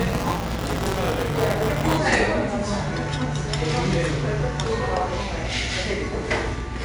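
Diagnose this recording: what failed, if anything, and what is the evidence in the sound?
The codec stage shows 4-bit ADPCM compression throughout. A gritty hiss rides on every loud passage and rises and falls with level. Sharp attacks are distorted. This fits a bitrate near 89 kbps, with a 4-bit step that cannot grow fast enough on sharp attacks.

The driver or buffer stage shows buffer tearing from 0.0 to 1.98 s: a steady robotic buzz at 188 Hz, heard only while sound is present. This fits a 256-sample buffer whose writer and reader cross each period, leaving about a tenth of each buffer replayed from roughly 20 ms earlier.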